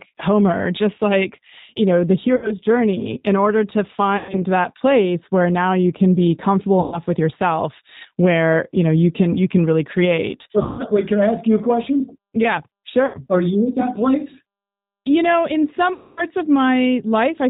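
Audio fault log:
throughout: G.729 codec at 8 kbit/s rebuilds the speech from a filter, pitch predictor and few pulses, so it sounds rough, synthetic and cut off above 4 kHz.
2.36–2.53, 4.17–4.39, 6.80–6.99, 10.63–10.82, 13.06–13.17, 15.93–16.26 s: VoIP packet loss concealed by the speech codec. The decoder filled 60–240 ms gaps by stretching the last sound into a fading buzz or noise before slowly recovering.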